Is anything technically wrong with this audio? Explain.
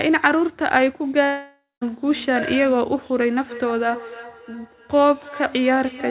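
Yes, two things stand out in this speech clip.

From 1.24 to 1.83 s there's a long network dropout, most likely the link stalling. The receiver had nothing to play, so it stretched the last bit of sound into a fading buzzy smear for about half a second, and the final 0.21 s or so goes quiet. When the speech resumes, roughly 0.58 s of it is simply gone.

From 3.47 s to the end there's feedback echo between two devices. A second device in the same room plays the call back, the first device's microphone catches that, and neither echo canceller touches the other's output. Each phrase comes round again roughly every 0.3 s, the loudest repeat about 16 dB below the speech, sounding thinner and more ringy each pass, all within the narrow band below 4 kHz that the call codec passes.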